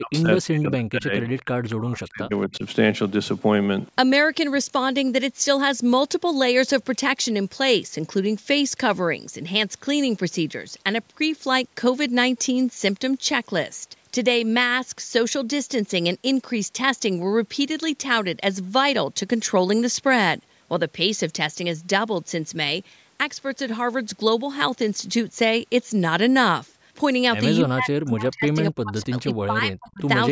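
From 0.0 to 1.27 s and again from 1.72 to 2.64 s, the echo canceller likely treated talk arriving from both ends at once as its own loudspeaker echo. The result is speech suppressed in double talk. The speech is pushed down by up to about 40 dB and breaks up, for roughly a second in the first stretch and about 0.7 s in the second.

In and around that gap, at 1.38 to 1.42 s and 1.65 to 1.74 s, an echo leak likely let loudspeaker sound slip past cancellation. A faint scrap of the audio returns 246 ms late, about 20 to 25 dB below the speech.

From 27.59 to 30.03 s the double-talk suppression returns, gating the speech on and off for about two seconds of that stretch.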